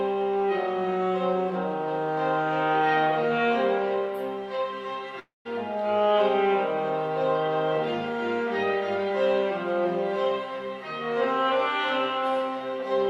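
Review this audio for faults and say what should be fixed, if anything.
Long network dropout, 5.19 to 5.47 s: the sound stretches into a fading buzz or hiss, then about 170 ms of silence before playback resumes with roughly 260 ms of audio missing. This is likely packets that never reached the receiver, which concealed the gap and then skipped the lost stretch. A larger jitter buffer, forward error correction or retransmission on a more stable connection would prevent it.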